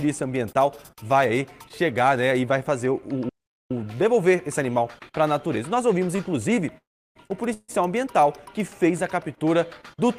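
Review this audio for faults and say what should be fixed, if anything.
At 3.29 to 3.71 s the sound cuts to silence for about 0.41 s, then resumes where it stopped. This is a playback stall, likely from the player running out of data or its thread being blocked. Feeding the output from a deeper, higher-priority buffer would prevent it.

At 6.16 to 6.20 s one sound is held about 20 ms too long with a slight buzz or dip, and nothing is lost. This short stall from a late packet happened because the jitter buffer emptied and the receiver stretched the last sound. A slightly larger jitter buffer would absorb this.

Two call audio freezes follow. At 6.78 to 7.17 s the sound trails into a fading buzz or hiss, then about 0.34 s of silence. At 7.53 to 7.70 s a shorter 0.15 s fill includes about 40 ms of silence. Both resume where they stopped, adding delay rather than dropping audio. The likely cause is packets held up in transit, leaving the jitter buffer empty. 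Adaptive jitter buffering, plus fixing the network path's congestion, would prevent these.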